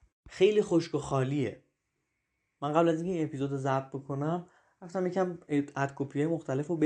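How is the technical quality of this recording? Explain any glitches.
The technical quality of the recording is good, and there are no glitches to explain.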